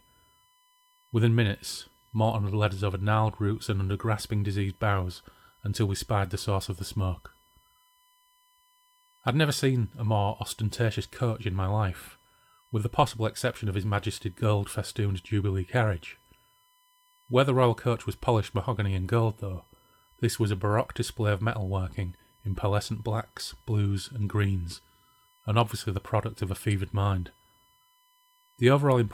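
From start to finish, the USB bus's 1 ms frame timing leaks current ripple into the audio path through power or ground, producing USB whine: a steady, fixed-pitch 1 kHz tone, faint at about 40 dB below the speech, sitting constantly beneath it.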